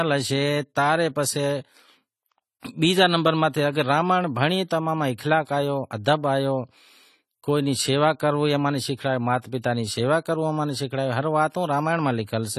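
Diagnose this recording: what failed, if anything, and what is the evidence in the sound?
The codec stage failed. Throughout the speech, nothing is present above 14 kHz, and the coding damage is plainly audible across the whole clip, not in bursts. This is most likely AAC compression at a low rate, with AAC-LC quantising frequency lines against a hearing model and pulling its cut-off down, which fits roughly 32 kbps. A plain low-pass filter would give the same ceiling but leave the speech clean beneath it. Here the damage sits below the cut-off too.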